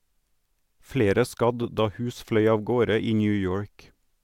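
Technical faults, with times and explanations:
Nothing here calls for a note, since the speech comes through without any technical fault to point to.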